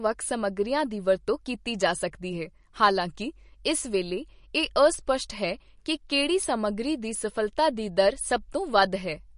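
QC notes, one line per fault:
Throughout, MP3 compression: the speech sounds plainly watery and swirly, with nothing above 10.6 kHz. The likely cause is a low-bitrate MP3 encode at 42 kbps, which cut the treble and let weak frequency lines flicker between frames.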